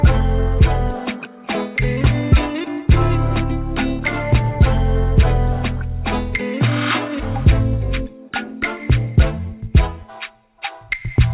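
No technical faults are audible.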